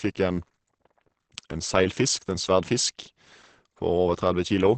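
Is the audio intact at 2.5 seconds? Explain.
No. Throughout the clip, including 2.5 s, the speech was likely squeezed through Opus compression in its low-rate speech mode, fitting about 16 kbps. Nothing survives above 8.6 kHz, leaving the voice muffled and hoarse.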